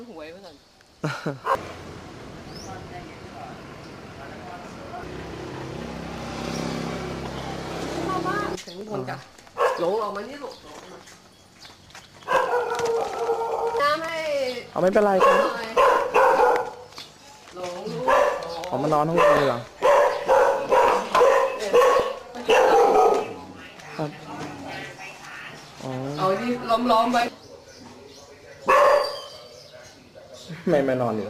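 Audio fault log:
0.92–29.9 s, clock drift buffer slips: a short click recurs at a steady interval of 2.64 s, roughly ten in all. The likely cause is two devices on separate clocks about 300 ppm apart, so the buffer between them drops or repeats around 30 samples each time.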